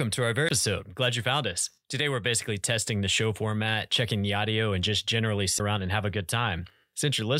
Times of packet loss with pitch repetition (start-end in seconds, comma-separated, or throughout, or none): none